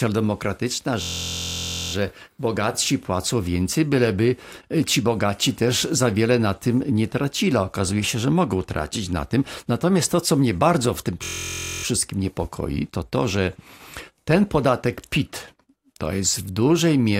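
From 1.02 to 1.93 s, just before "bogatsi płacą więcej byleby", and again from 11.24 to 11.84 s, between "mnie bardzo w tym" and "niepokoi to to że", a system hang loop replays one 23.22 ms fragment, which fits a 1024-sample buffer. It becomes a steady 43.1 Hz buzz. Unlike a dropout, nothing goes silent, and the speech resumes with essentially nothing missing.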